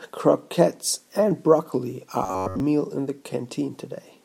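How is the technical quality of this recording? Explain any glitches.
One glitch stands out: robotic sound from repeated short buffers between 2.24 and 2.6 s of the speech. Across that stretch the voice collapses into a rigid, metallic buzz pitched at 93.8 Hz, still loosely tracking the words. The likely cause is audio arriving too slowly, so playback keeps looping the last chunk, about 10.7 ms long, while real audio is skipped for most of the span. A spectrogram shows evenly spaced harmonic lines at multiples of 93.8 Hz, and the waveform shows one short shape repeating.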